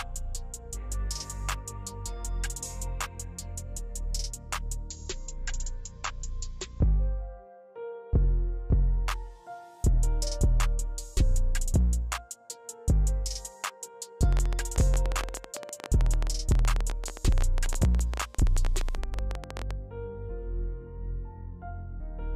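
From 4.89 to 8.89 s the audio drops to a lower-bitrate version of an adaptive stream: it switches abruptly, with no gap, to a dull, smeary sound with nothing above 7.7 kHz, which fits a fall from around 96 to 32 kbit/s AAC while the connection slowed. Then from 14.3 to 19.7 s there's a train of clicks, near-identical pops at roughly 15 per second on an uneven rhythm, around seventy in all and peaking about 10 dB over the sound, most likely from nearby electrical interference or a faulty connection.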